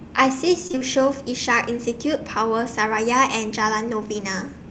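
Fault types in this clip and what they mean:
Repeated packet loss (robotic sound): from 0.67 to 0.82 s, four short dropouts, the longest about 19 ms, were each patched by stretching the preceding sound, leaving nearly half that stretch synthetic. It sounds choppy. On a spectrogram, smeared, frozen harmonic bands alternate with brief gaps.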